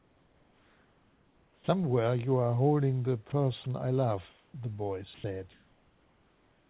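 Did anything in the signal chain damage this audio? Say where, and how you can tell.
Yes. The damage sits in call processing, at the sender's voice activity detection and discontinuous transmission. From 0 to 1.68 s, 4.30 to 4.54 s and 5.52 s to the end, the room background is replaced by a smooth, featureless hiss. It is about 6 dB quieter at the start and about 1 to 2 dB quieter in the later gaps. This is comfort noise in place of the background, likely synthesised by the receiver while the sender stopped transmitting.

The onset is clipped by the voice detector at 1.57 to 1.68 s. The first 110 ms of the sound that starts there are missing, so it begins abruptly with no soft attack, and comfort noise fills the space where that opening should be. The likely cause is a detector that was slow to register that sound had resumed, so those opening frames were never sent.

Sound is dropped by the voice detector at three points: 3.30 to 3.32 s, 3.64 to 3.66 s, and 5.14 to 5.24 s. 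The first two are brief nicks, and the third removes about 70 ms of the sound. Each time, steady noise briefly takes over and the sound returns once transmission restarts. The likely mechanism is quiet passages being classed as background, which halts sending mid-sound. The call path's narrowband coding, with nothing above 4 kHz, fits a G.711-type codec.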